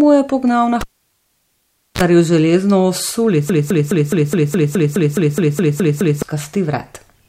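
At 0.81 s, right after "pognal na", the speech is cut by a cable pulled and plugged in. A pop opens a stretch of near silence lasting about 1.15 s while the connection is broken. As the plug goes back, a brief burst of 60 Hz mains buzz, about 36 ms long, comes through while only the tip makes contact. A second pop at 2.01 s brings the signal back on "zaril železno".

From 3.50 s to 6.22 s the audio falls into a broken-record loop. A fragment about 209 ms long plays 13 times back to back, identical on every pass, producing a rapid mechanical stutter instead of continuing speech. This is likely a stall somewhere in playback, encoding or streaming, with the last held piece resent until the flow resumed. Whatever should have been heard during those 2.7 seconds is missing.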